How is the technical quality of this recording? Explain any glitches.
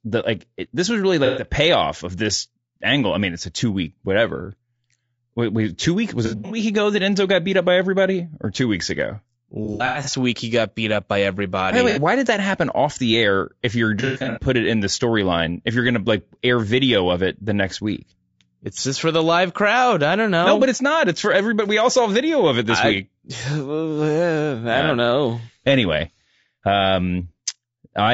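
The recording has plainly audible technical damage: a constant coarse codec texture and five short breakups.

Throughout, the speech sounds rough and grainy, with noise filling the gaps between harmonics and a thin, synthetic top band. This is likely low-delay AAC compression (AAC-ELD), whose short frames resolve pitch poorly, and the degree of damage fits a bitrate around 32 kb/s.

AAC frame loss with concealment causes smeared, noisy, phasey patches at 1.25–1.46 s, 6.26–6.58 s, 9.65–10.14 s, 11.90–11.99 s and 14.00–14.44 s. Missing frames were patched from the last good spectrum. The losses total 120, 180, 240, 60 and 240 ms. The second, third and fifth are scattered, with the longest run about a tenth of a second.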